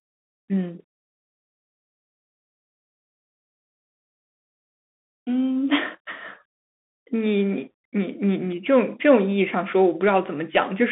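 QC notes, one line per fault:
Throughout, Bluetooth CVSD headset codec: muffled, boxy speech confined to roughly 200 Hz to 3.6 kHz, with scratchy s sounds and granular hiss, because one-bit up/down delta coding cannot track fast, loud detail.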